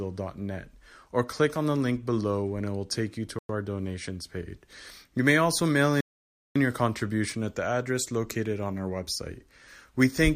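At 3.39 s, just after "will take you to", the speech drops to silence for about 0.11 s and resumes with "our donations page" at 3.49 s. A longer gap follows at 6.01 s after "may also mail", lasting about 0.55 s until "your contribution at the" picks up at 6.56 s. Both are clean cuts to silence, with no decay and no garbling, the likely signature of a Bluetooth stall: the headphones' buffer ran empty while delayed packets were resent.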